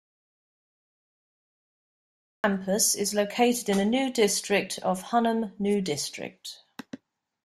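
Audio dropout to silence from the start to 2.44 s: dead silence without room tone, likely lost input, then speech enters at "is located in a".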